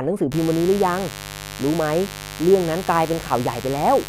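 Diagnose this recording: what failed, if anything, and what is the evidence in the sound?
Mains buzz enters the analogue wiring at 0.32 s and persists to the end: a raspy 50 Hz harmonic series, about 15 dB beneath the speech, from switching spikes let in by a dimmer, rectifier or missing shield.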